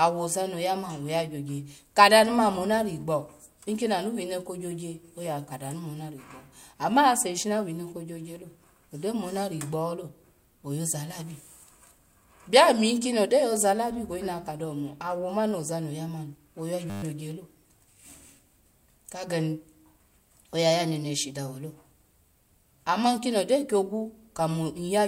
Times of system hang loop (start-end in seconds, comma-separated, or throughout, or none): 16.90-17.03